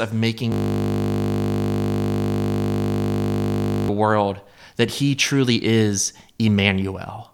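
From 0.52 to 3.89 s, a system hang loop replays one frozen 20 ms buffer as a steady 50 Hz buzz that replaces the speech outright rather than humming beneath it, before "world that he truly".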